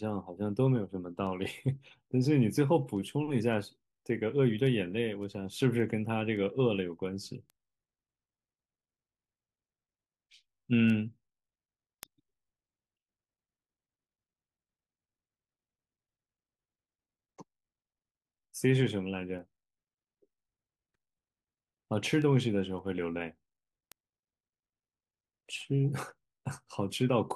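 From 0.13 s to 27.31 s, sharp ticks recur about every half second through the speech. These are word clock ticks: the receiver runs on its own clock, roughly 40 ppm off the sender's, so each slip drops or repeats a single sample.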